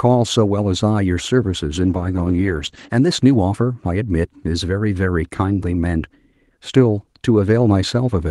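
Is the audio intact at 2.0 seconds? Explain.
No. A call bitrate drop runs from 1.82 to 2.95 s. The encoder was starved of bits, consistent with Opus falling from around 32 to 11 kbps, coding more coarsely and narrowing the band from 12 kHz to 8 kHz, so the speech turns rough and muffled.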